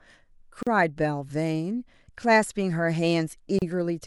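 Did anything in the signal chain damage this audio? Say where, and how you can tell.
Yes, at the codec stage, where separately encoded pieces of this speech were joined without trimming. This produces a gap at a join of encoded pieces. Silences open at 0.63 to 0.67 s (about 39 ms) and at 3.59 to 3.62 s (about 32 ms), with edges smeared by the codec. Each encoder run left its start-up delay and last-frame padding in place. A network dropout would lose material, but here the sound resumes exactly where it stopped.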